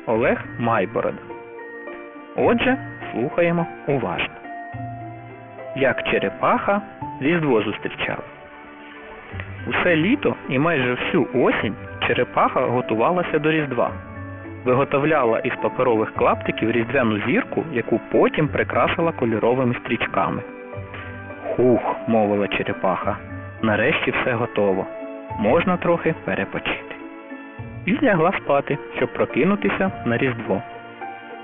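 Aliasing runs through the whole clip, from start to finish. The sample rate was reduced without a low-pass filter beforehand, which fits a drop to a 6 kHz rate, so everything above the 3 kHz fold point reflects back down to unrelated, wrong frequencies. The folded content sits only about 10 dB below the wanted signal, giving bright, sharp sounds a gritty, metallic edge, and the spectrum stays dense right up to the 3 kHz limit instead of rolling off.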